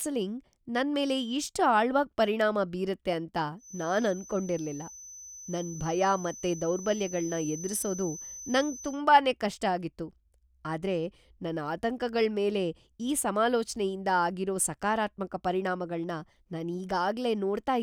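From 3.57 s to 9.02 s a thin, steady whistle at about 6.1 kHz sits behind the speech, roughly 15 dB below it, swelling and fading slowly in level. This is a feedback whistle. The likely cause is a loudspeaker-to-microphone loop held just at the edge of feedback, so that a single high frequency keeps recirculating and sustains itself without building into a full howl.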